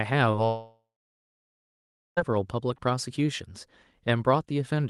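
At 0.31 to 0.35 s, the speech briefly smears and wobbles, a blip of about 20 ms where the sound is carried on rather than heard. This is short concealed packet loss: roughly 20 ms of the call arrived too late for the decoder, so the receiver extended the preceding sound, following its pitch where it was voiced and using shaped noise otherwise, then blended back into the real audio. This happens on an Opus call path whose upper band stops near 12 kHz.

From 0.45 s the speech gives way to a buzz or hiss continuing the last sound that fades over a few tenths of a second into silence lasting about 1.34 s. Speech returns at 2.19 s, picking up further along with nothing recovered from the gap. This pattern is most likely a long network dropout. About 1.72 s of audio never reached the receiver, so it stretched the final sound it had and then fell quiet until packets arrived again.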